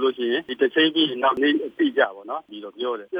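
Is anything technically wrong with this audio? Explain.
Yes, there are two kinds of fault.

Compressed frames skipped, at 1.37 s and again at 2.49 s: whole blocks of the encoded stream never reach the output, apparently 92.9 ms frames. Each time roughly 0.7 s of audio vanishes, about ten frames at the first point and several at the second.

Sudden gain jump, at 2.04 s and lasting to the end: the level drops abruptly by about 7 dB, with the sound and background noise falling together in a single step. The likely cause is a digital gain change applied from one sample to the next without any ramp.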